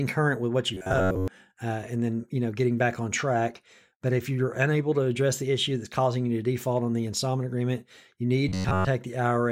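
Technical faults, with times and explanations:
0.74 to 1.28 s and 8.49 to 8.88 s, robotic sound from repeated short buffers: new audio likely arrived too late for playback, so the software filled each gap by looping the last slice of sound, roughly 10.7 ms long, while most of the real audio in those stretches was skipped. The constant loop period stamps a fixed 93.8 Hz pitch onto the speech, turning it into a rigid, metallic buzz that still loosely tracks the speech's rhythm.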